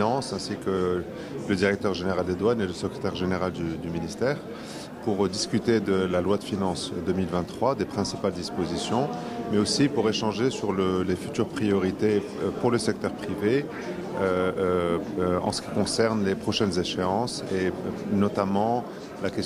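Nothing technically wrong turns up anywhere in this audio, so there's no fault to point to and no cause to track down.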